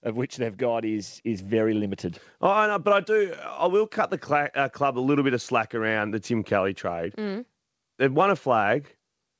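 Speech clip where the automatic gain is rising from 0.05 to 2.06 s: the AGC judged the input too quiet and ramped up about 6 dB, so voice and background swell together. Nothing comes through above 8 kHz, which fits a wideband call codec like G.722.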